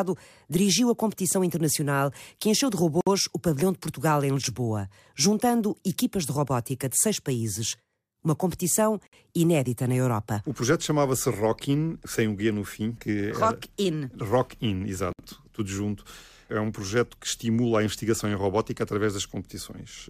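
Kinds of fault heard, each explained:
Gap at a join of encoded pieces: the speech was encoded as separate pieces and spliced without trimming each run's start delay and final-frame padding, so a roughly 60 ms silence with smeared edges cuts in every 6 s, at 3.01, 9.07 and 15.13 s.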